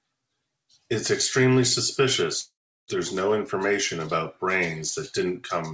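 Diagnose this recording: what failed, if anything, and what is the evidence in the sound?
The network stage failed, likely as a long network dropout. From 2.40 s to 2.90 s the speech stops. The last sound carries on as a short fading buzz, then about 350 ms of silence. The 480 ms in between never arrives, and speech resumes after the gap.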